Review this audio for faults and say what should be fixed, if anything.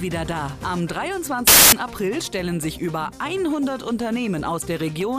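From 1.47 s to 1.72 s, roughly a quarter second, the audio collapses into loud, harsh broadband noise: samples built from the wrong bytes. For that stretch the reader assembled each sample with its bytes misaligned or in swapped order, so the rapidly varying low-order bits landed in the high-order position and dominated every value. Prevent it by validating byte order and frame alignment at the decoder before samples are assembled.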